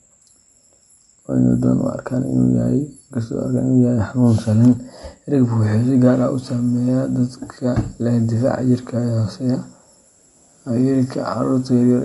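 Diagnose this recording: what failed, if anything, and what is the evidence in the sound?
Codec stage, throughout the speech: nothing sounds above 11.3 kHz, and the band below has a plainly audible watery swirl with smeared onsets. Likely MP3 compression at a bitrate near 48 kbps: the encoder truncates the treble and drops weak spectral lines that flicker frame to frame.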